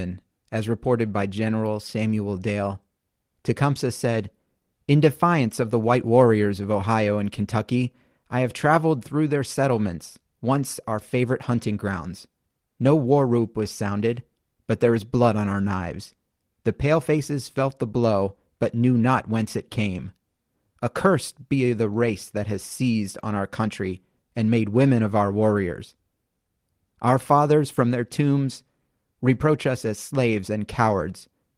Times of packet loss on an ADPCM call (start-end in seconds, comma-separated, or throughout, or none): none